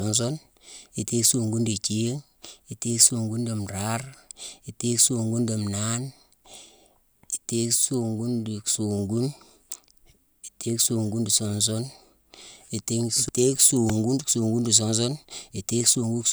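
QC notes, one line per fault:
4.48 s: repeated buffer. A roughly 1.3 ms slice, which fits a 64-sample buffer, plays two extra times, heard as a brief click or buzz.
13.90 s: repeated buffer. A tiny slice of the same size repeats three extra times with hard joins because new audio arrived late. No audio appears lost.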